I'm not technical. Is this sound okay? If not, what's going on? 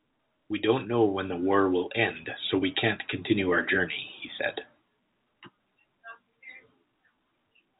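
Yes, this speech sounds fine technically: it carries the ordinary narrow sound of a landline telephone call (G.711 telephone coding), where nothing above about 3.8 kHz comes through, and there are no glitches, dropouts or other problems to point to.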